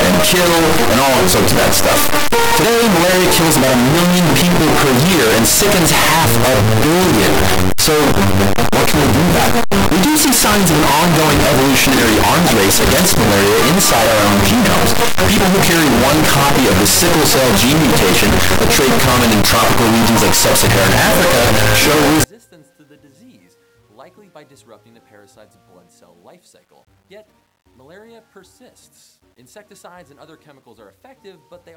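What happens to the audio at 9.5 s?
That's signed and unsigned mixed up, 0 to 22.24 s. A likely flipped top bit on the 8-bit samples turns zero crossings into full-range jumps: harsh, uniformly loud distortion.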